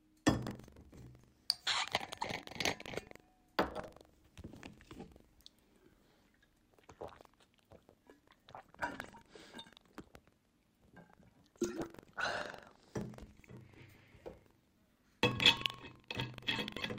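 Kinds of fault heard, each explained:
Buffer tearing: the ring buffer's writer and the hardware reader have slipped and cross inside every period, so a small slice of each buffer replays audio from about 150 ms earlier. From 0.3 s to the end, the sound carries a 23.4 Hz rattle, fitting a 2048-sample buffer.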